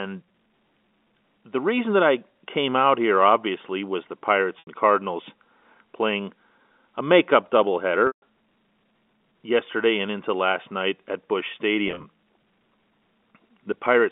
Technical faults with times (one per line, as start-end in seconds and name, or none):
4.59-4.67 packet loss with pitch repetition
8.07-8.22 packet loss with pitch repetition
11.88-12.04 packet loss with pitch repetition